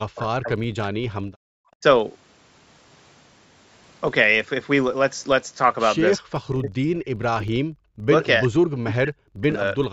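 Running under the whole thing is a low 25 Hz buzz, a filter restarted on every block. It forgets its state each time, so every block starts with a little tick. The rate fits blocks of about 40 ms, and the buzz rises and falls with the level of the speech.

Right from 0.0 to 0.81 s the voice sinks hard, something like 40 dB at its deepest. That's speech suppressed in double talk, and the likely cause is the echo canceller hearing both sides at once and clamping down on the talker along with the echo. The same pattern comes back at 1.75 to 1.83 s, 6.2 to 7.41 s, 7.91 to 8.11 s, 8.44 to 8.51 s (shallower, around 30 dB), 8.78 to 9.49 s and 9.74 s to the end. The longest bite is roughly a second in the 6.2 s stretch.

In between, at 1.2 to 1.47 s, you get background gated by the echo canceller. The room sound pulls down by about 40 dB for a moment while the far end plays, then pops back once the canceller lets go. 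The lowest bass is taken out, which is just the call microphone processing doing its thing.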